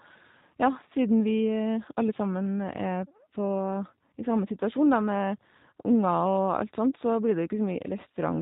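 From start to finish, the speech carries plainly audible G.729 codec damage, which fits 8 kbit/s G.729A. Nothing above 4 kHz survives. Voices sound muffled, slightly rough and synthetic.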